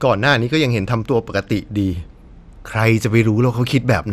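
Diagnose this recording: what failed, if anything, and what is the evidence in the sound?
Codec stage: the speech sounds dull and granular throughout, nothing above 15.1 kHz. Likely MP2 compression starving its upper sub-bands, which fits roughly 80 kbps.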